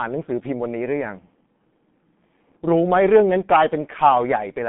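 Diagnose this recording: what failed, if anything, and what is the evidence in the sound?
The codec stage failed: the speech runs through a G.723.1 codec for the whole clip. Nothing sounds above 3.8 kHz, the band sits roughly between 150 Hz and 3.5 kHz, and the voice is muffled and hoarse with smeared consonants, consistent with a coarse, slowly updated voice model at around 6 kbit/s.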